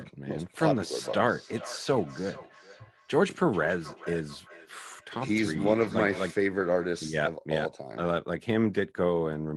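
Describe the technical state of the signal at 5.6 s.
At 5.6 s the signal is inside a stretch of feedback echo between two devices, running from 0.43 s to 6.43 s. The speech returns at intervals of around 400 ms, thinner and ringing, peaking about 17 dB below the direct speech. A second device in the room replays this microphone's audio, and the local echo canceller, which removes only its own playback, lets it through.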